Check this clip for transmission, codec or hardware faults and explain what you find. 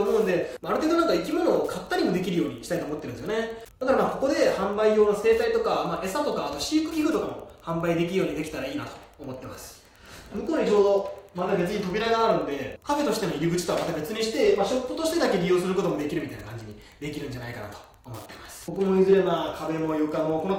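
There's one fault, and it runs the whole way through: Wi-Fi interference. Underneath the audio you get a steady ticking at just under ten per second, sitting well down in the mix, about 35 dB below the signal. That spacing matches a Wi-Fi beacon every 102.4 ms. A radio sitting close to the audio circuitry gets rectified by it, so each beacon burst turns into a small audible click.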